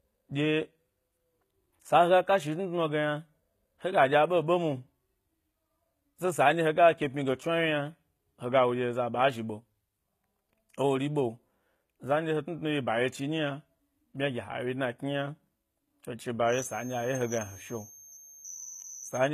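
HE-AAC compression runs through the whole clip. The treble is likely rebuilt by spectral band replication: upper bands are copied from lower ones and shaped only coarsely, which fits a low bitrate around 20 kbps. Sibilants sound gritty and metallic, and nothing reaches above 14.9 kHz.

A feedback whistle sounds from 16.44 s to the end at 19.34 s: a thin, steady 6.1 kHz tone sitting roughly 15 dB under the speech and swelling and fading slowly. Its likely cause is a loudspeaker-to-microphone loop held just at the edge of feedback, ringing without running away.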